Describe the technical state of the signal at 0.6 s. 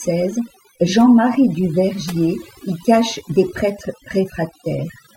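At 0.6 s the speech sits over a lowered, twinkling background: overdone noise removal, present throughout, where too-strong noise reduction strips quiet bands near the noise estimate.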